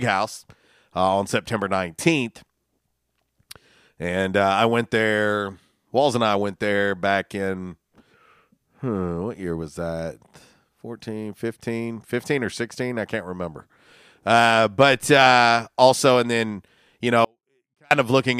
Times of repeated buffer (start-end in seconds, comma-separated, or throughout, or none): none